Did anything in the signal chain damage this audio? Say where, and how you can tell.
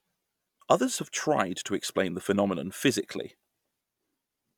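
No, nothing in the signal chain has audibly damaged this speech: there are no dropouts, level jumps, distortion or spectral changes at any point.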